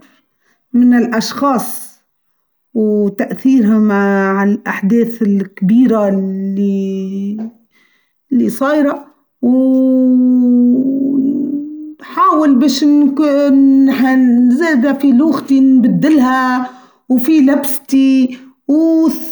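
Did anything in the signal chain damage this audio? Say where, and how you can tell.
No, nothing in this speech recording stood out on listening as damage from any stage of the signal chain.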